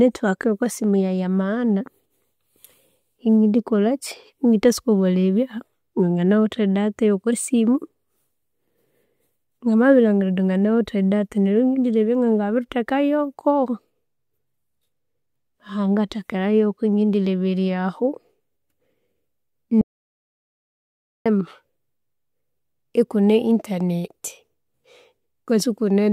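A speech recording with one audio dropout to silence from 19.81 to 21.26 s: the speech cuts off abruptly and returns just as suddenly, leaving about 1.44 s of total silence with no room tone underneath. On a waveform the trace collapses to a flat line, and a spectrogram shows a blank band across all frequencies. The likely cause is a brief loss of the input signal, with the recorder writing silence until it returned.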